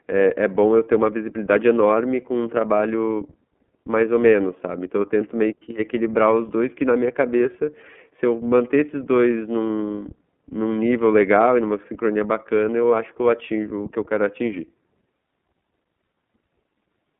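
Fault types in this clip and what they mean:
iLBC codec: speech held to 200 Hz–3.5 kHz with a plainly rough, synthetic grain rather than clean telephone filtering, which fits independently coded 30 ms frames at 13.33 kbps.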